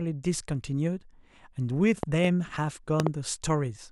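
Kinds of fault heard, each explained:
Loud pop: a burst of two sharp, thumping pops, at 2.03 to 2.27 s and again at 3.00 to 3.09 s, standing roughly 15 dB and then roughly 20 dB above the speech. The speech carries straight on beneath each pair, which separates this from a dropout or a clipped peak. The weight and double strike point to a likely voltage step, such as a plug, switch or static discharge, rather than a tiny digital click.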